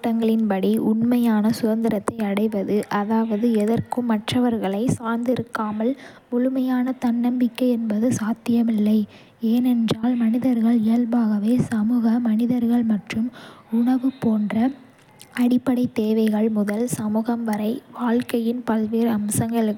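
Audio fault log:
Nothing to log here: the speech comes across without any audible fault anywhere in the clip.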